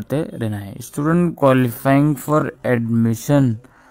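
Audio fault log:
0.8 to 3.91 s, time-stretched section: the pace abruptly slows to 0.58 times with pitch unchanged, so it drags, likely software repeating short pieces to lengthen it.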